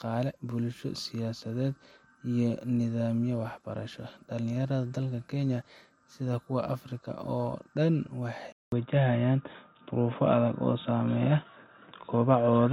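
At 8.52 s the speech cuts out for 0.2 s, then returns dull and boxy to the end, with nothing above 3.8 kHz, a level shift of about 5 dB and new background noise well below it. The input was likely switched to a poorer device with a narrower band.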